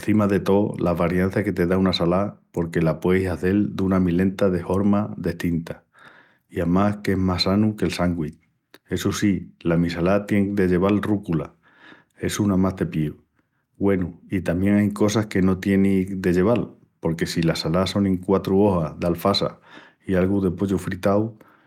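No technical faults are audible anywhere in the speech recording.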